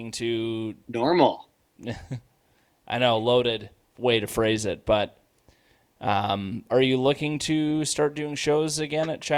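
Nothing technically wrong turns up anywhere in this speech recording, so there's no fault to point to.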